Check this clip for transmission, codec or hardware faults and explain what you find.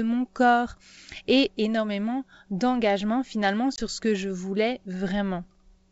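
One transmission fault is audible. From 3.76 to 3.79 s there is packet loss on an ADPCM call. About 20 ms of speech, roughly one packet, drops to hard-edged silence. The decoder's predictor and step size then lose sync with the sender's, so the speech comes back slightly distorted before settling. The G.722 wideband coding at 64 kbit/s adds only faint damage of its own.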